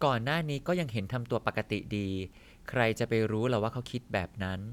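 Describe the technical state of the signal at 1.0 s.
At 1.0 s the audio is intact, with no audible fault in the signal.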